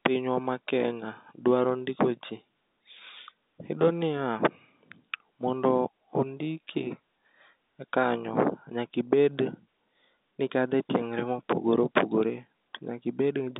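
There are no technical faults to describe in time order in this speech.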